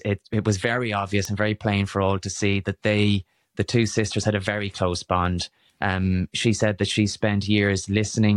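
Speech carrying word clock ticks from 0.33 to 7.67 s, roughly once a second, as unlocked digital clocks slip a single sample, visible as thin vertical spectrogram lines.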